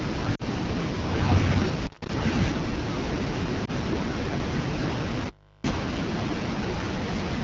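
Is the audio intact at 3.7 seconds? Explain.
No. Between 3.65 and 3.70 s there are lost AMR speech frames. The decoder reused the last good pitch and vocal tract settings at lower gain. This gives a brief dip or warble, which fits a single lost frame.

The AMR wideband (HD Voice) codec also affects this moment, as it does the whole clip. Speech is modelled from excitation pulses. The top band is filled with shaped noise. The damage is plainly audible as a rough, raspy texture, which points to a low rate of about 8.85 kbit/s.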